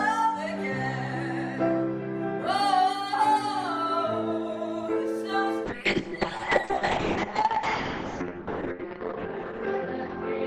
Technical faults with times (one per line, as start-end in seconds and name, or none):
5.70-10.47 call bitrate drop